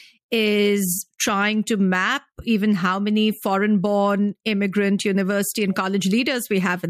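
No technical faults can be heard anywhere in the recording; the signal stays continuous and stable throughout.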